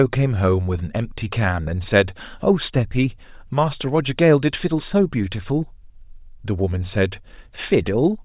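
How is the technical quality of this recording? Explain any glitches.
No glitches can be heard in this speech recording, and its signal comes through technically intact.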